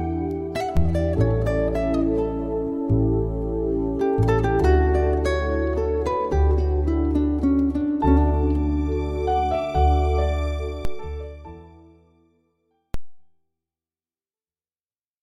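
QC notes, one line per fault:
0.77 s, 10.85 s, 12.94 s: DC step. The waveform's zero line jumps suddenly, by about -14 to -15 dBFS. Each jump is a low thump. A high-pass near 2 Hz then pulls the offset back to zero. The sound itself carries on unchanged.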